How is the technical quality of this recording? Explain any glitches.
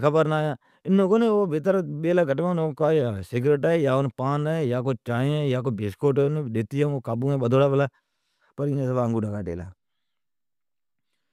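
The technical quality of this recording is sound, with no glitches to explain.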